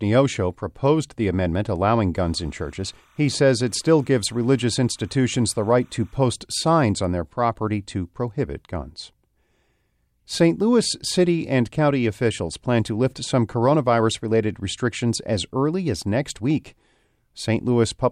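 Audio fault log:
2.15–6.16 s, timecode bleed: linear timecode from an adjacent track or cable leaks into the speech, adding a steady chirping warble well under the voice, about 40 dB below it. The code is a square wave that flips between roughly 1 and 2 kHz, carrying 29.97 frames per second, hence the buzzy, rhythmic chatter. On a spectrogram it shows as two faint horizontal bands near 1 kHz and 2 kHz with odd harmonics above; the waveform barely changes at that level.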